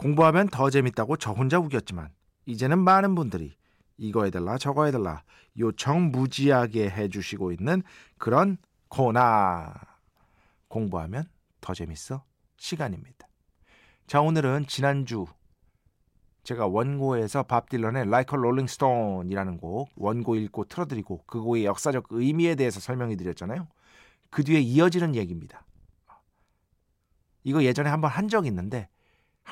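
A speech recording with nothing technically wrong with it.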